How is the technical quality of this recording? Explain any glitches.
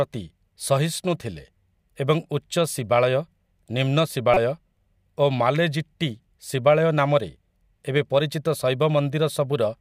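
The recording has one glitch. Damaged data in a compressed stream appears from 4.34 to 4.37 s, a burst of about 36 ms in the speech. Some bytes of the encoded stream at that point were lost or corrupted, so the decoder could not read those frames properly, lost its sync and had to search for the next valid frame header. The result is a brief disturbance that cuts into the speech.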